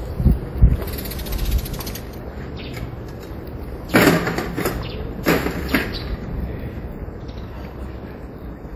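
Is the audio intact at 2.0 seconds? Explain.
No. At 2.0 s, as through the whole clip, this sound carries a ringing, washy smear with a hiss that swells and fades with the signal, the likely mark of WMA compression. Long transform blocks spread quantisation noise over tens of milliseconds and drop weak components, which fits a bitrate around 48 kbps. Unlike a plain low-pass filter, the top end still reaches about 20.1 kHz; the damage is smearing and breathing noise, not missing treble.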